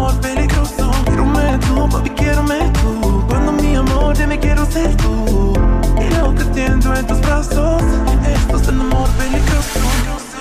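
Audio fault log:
1.53–9.37 s, clock drift buffer slips: a click recurs about every 1.57 s, roughly seven times. This is likely two devices running on separate clocks that disagree by around 200 ppm, so the buffer between them slowly drifts until a short block, on the order of 15 samples, is dropped or repeated. Each slip breaks the waveform's continuity, which is heard as a brief tick at a steady interval while sound is present.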